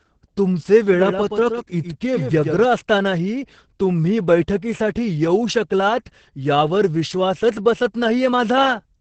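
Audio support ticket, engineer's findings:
Opus voice compression, whole clip: muffled, hoarse, a bit robotic, nothing above 8.5 kHz. Sounds like SILK in wideband mode starved of bits, maybe around 10 kbps, so the excitation's coded coarsely and the band's capped. Pretty heavy damage.

Doubled audio track, 0.93 to 2.65 s: a dry full-band copy trails by about a tenth of a second, a few dB down, with hard start and stop. Likely a second capture path or edit leaving two copies overlapped out of step.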